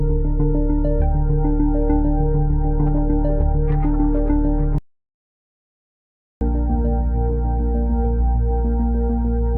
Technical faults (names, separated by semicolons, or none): audio dropout to silence